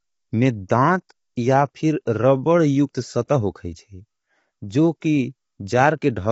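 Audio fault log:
throughout low-delay AAC compression: The speech sounds rough and grainy, with noise between the harmonics and nothing above 7.7 kHz. This is likely low-delay AAC such as AAC-ELD. Its short frames resolve pitch poorly, and the bitrate is near 24 kbps.
0.69 s and 3.27–3.29 s pre-echo: A short hiss comes just before two sharp attacks, lasting 13 ms and 22 ms, and the onsets sound softened. The codec spreads quantisation noise across each block, so noise sized for the loud attack leaks into the quiet moment before it.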